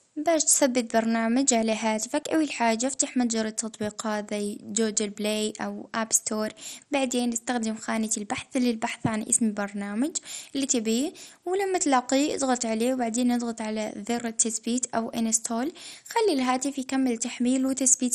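From start to end, the speech is dull, with nothing above 13.9 kHz. A gurgling, granular distortion runs through it. Upper bands flicker in and out. This is likely MP2 compression, heavily starved of bits, which fits a rate near 56 kbps.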